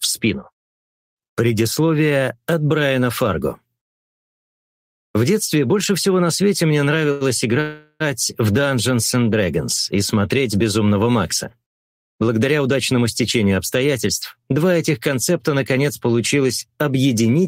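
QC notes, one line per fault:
7.11–7.23 s, short stall from a late packet: the sound is held about 92 ms too long, with a slight buzz or dip as it stretches. A packet was late, the jitter buffer ran dry, and the receiver extended the last sound until it arrived, then resumed without losing anything.
7.61–8.02 s, call audio freeze: the sound turns into a fading buzz or hiss for about 395 ms, ending in roughly 20 ms of near silence, before picking up where it stopped. The likely cause is packets held up in transit, emptying the jitter buffer so the receiver had to fill the wait.
12.28–14.53 s, jitter buffer speed-up: the audio runs about 7% fast at unchanged pitch and sounds hurried. The buffer held more than it aims for, so the receiver trimmed many tiny pitch-period slices, around 150 ms in total, to bring latency back down.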